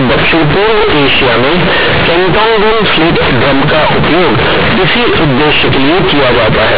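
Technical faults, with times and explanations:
Throughout: companded audio read as linear. The A-law telephone bytes are played as plain linear 8-bit samples without expansion, so each sign change swings the output across roughly half its range. Quiet and loud speech end up equally large, giving harsh, buzzy distortion and strong noise in pauses.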